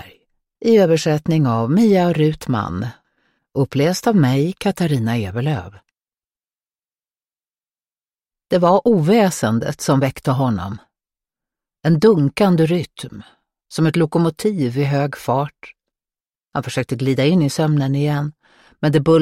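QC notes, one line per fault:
Nothing to flag here, as no faults turned up anywhere in the audio.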